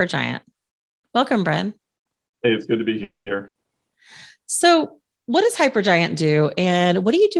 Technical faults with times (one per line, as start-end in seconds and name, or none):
3.03-3.37 call audio freeze
3.47-3.58 burst of packet loss